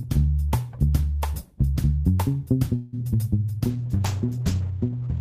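A call audio freeze runs from 2.75 to 2.95 s, where the sound stalls and the last fragment is stretched into a fading buzz for about 170 ms. The likely cause is late packets draining the jitter buffer. When they arrive, the audio resumes where it stopped, so nothing is lost, but everything after it is pushed back by that amount. A call bitrate drop follows from 3.71 s to the end. The audio turns coarse and watery, and its top end is cut off above 8 kHz instead of reaching 20 kHz. That points to the encoder being throttled from around 32 kbps to roughly 9 kbps after the bandwidth estimate fell.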